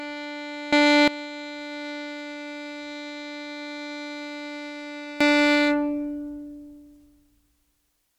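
Sudden gain jumps lift the music about 17 dB from 0.73 to 1.08 s and about 19 dB from 5.21 s on, likely unramped digital gain, visible as abrupt vertical waveform steps.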